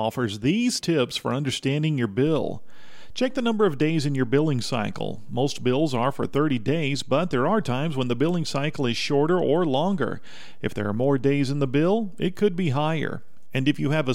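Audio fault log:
2.27 s to the end: DC step. Right after "tips for understanding your" there's a single low thump as the waveform's zero line jumps to a new resting level, about -32 dBFS off centre, and it just stays there for the rest of the clip. You hear the thump only once, at the jump, because a held offset is inaudible. The speech carries on unchanged over the shifted baseline, which quietly eats a bit of headroom on one side.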